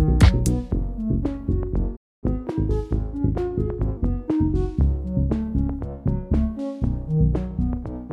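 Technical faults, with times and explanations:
1.96–2.24 s, playback stall: the sound halts mid-flow and the output falls silent for 0.26 s, then resumes from the point where it stopped, with nothing skipped. The likely cause is a player that briefly ran short of data or had its output thread blocked. Unlike a dropout, where a chunk of audio is lost and the sound jumps ahead, here the material is held back and delivered late, so continuity is preserved.
2.24–3.97 s, catch-up at higher speed: right after the stall the audio runs 1.15 times faster, and its pitch rises by about two semitones. The player resamples the delayed material so it consumes the backlog quickly and regains the lost time, then drops back to normal speed at 3.97 s. What distinguishes this from a deliberate pitch shift or tape wobble is that speed and pitch rise together, for a fixed stretch, immediately after a silence.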